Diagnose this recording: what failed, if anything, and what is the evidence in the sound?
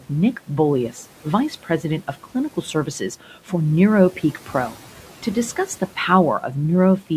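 Call processing: the noise suppressor cut speech at 1.63–1.84, 3.21–3.52 and 4.34–4.54 s, mistaking it for noise and swallowing it by about 10–11 dB.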